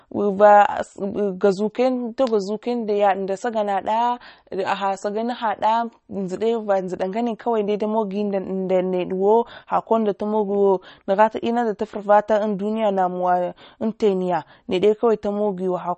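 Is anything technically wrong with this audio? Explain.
Yes, the whole clip carries plainly audible damage, likely from MP3 compression at a starved bitrate, around 33 kbps. There's nothing above 8.4 kHz, so the speech sounds dull, and weak frequency lines flicker in and out between frames, giving that watery, swirly texture with chirpy s sounds.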